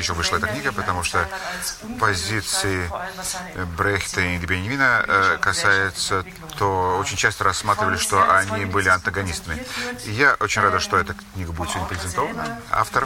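Nothing stood out as a technical fault on listening to this clip.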